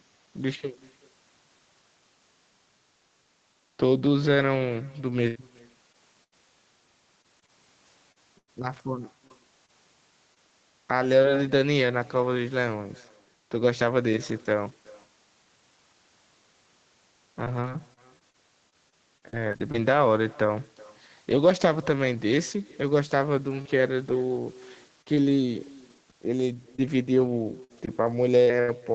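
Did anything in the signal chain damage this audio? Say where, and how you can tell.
Yes. Damage comes from two stages, call processing and the network, heard over a speech band that stops at 8 kHz, which fits a wideband Opus setting of around 20 kbps.

Echo with no canceller runs through the whole clip. Every phrase is trailed about 0.4 s later by a faint, thinner copy, at about 26 dB below the speech. The far end is playing the call on a loudspeaker, its microphone picks it up, and nothing removes it. The talker hears their own voice back after the network round trip.

Repeated packet loss (robotic sound) occurs in three stretches. From 5.27 to 11.26 s there are 12 gaps, the longest 98 ms. From 17.44 to 19.76 s there are 12 more, none longer than 39 ms. From 26.76 to 28.70 s there are 5, the longest 74 ms. Concealment covers 8 to 12 percent of each stretch. The receiver extends the last sound into each hole, and closely spaced holes give the choppy texture.

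Scattered short gaps appear between 23.62 and 25.32 s: roughly three isolated losses, the longest around 40 ms, about 100 ms missing in total. Here the losses are spread out, so the network damage shows as brief ticks and small smears rather than a continuous robotic quality. Each hole is again bridged by continuing the preceding sound.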